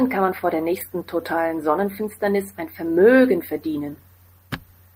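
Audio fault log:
Nothing stood out on listening to this speech recording.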